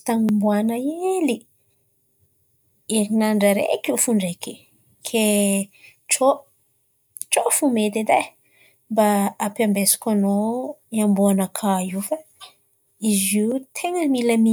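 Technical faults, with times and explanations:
No technical faults are present in this speech clip. Nothing in it calls for a time mark or an explanation.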